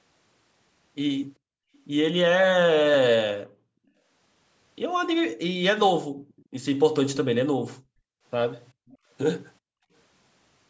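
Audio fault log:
6.28–6.45 s and 8.87–8.97 s, echo leak: a faint delayed copy of the speech trails in about 400 ms late, roughly 30–35 dB down, likely loudspeaker sound slipping past the far side's echo canceller.
7.78–8.24 s, 8.73–9.1 s and 9.6–9.92 s, background gated by the echo canceller: room tone drops by about 40 dB for half a second or less, as the canceller clamps the mic while the loudspeaker plays, then releases.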